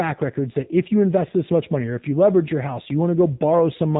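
Throughout the speech, the AMR narrowband mobile codec is plainly audible: nothing passes above 3.8 kHz, and the voice is rebuilt from a vocal tract model with sparse pulses, giving a buzzy, synthetic edge that fits a low mode near 7.4 kbps. A simple low-pass filter would only dull the sound, without that texture.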